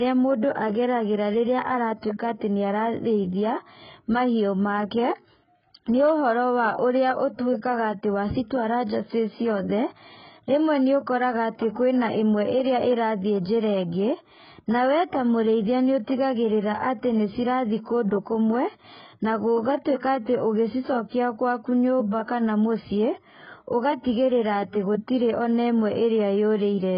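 AAC compression damage runs through the whole of this speech clip, which has nothing above 5.2 kHz, so sibilants lose their top and the sound turns dull. The damage is heavy: with too few bits to describe the spectrum, the encoder has likely thrown away detail and patched bands, leaving a smeared, warbling texture on sustained sounds and a fizzy edge on consonants, which fits an AAC-LC stream at roughly 12 kbps.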